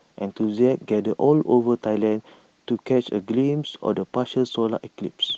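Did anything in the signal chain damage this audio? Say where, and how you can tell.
No, nothing in the signal chain damaged this speech.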